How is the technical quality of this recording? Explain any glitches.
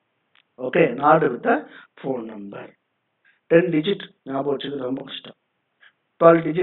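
No glitches or faults heard.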